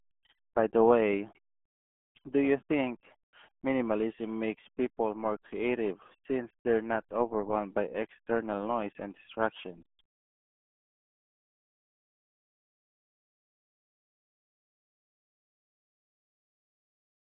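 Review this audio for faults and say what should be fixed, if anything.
Throughout, the speech passed through the RealAudio 14.4 codec, whose heavy damage points to a rate near 8 kbit/s. Only a telephone band of 200 Hz to 3.4 kHz survives, with nothing above 3.7 kHz, so the voice sounds muffled and gargly. To prevent this, keep the recording in a lossless or high-bitrate format and never route it through a dial-up-era speech codec.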